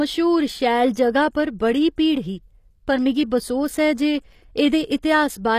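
Across the whole speech clip the top end stops dead at 14.9 kHz, and s sounds come out gritty and lispy. This is likely HE-AAC compression: the treble is rebuilt from copied lower bands rather than coded, which fits a low bitrate near 24 kbps.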